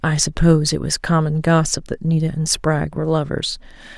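Nothing goes wrong anywhere in this bit of speech, so there's no technical fault to walk through here.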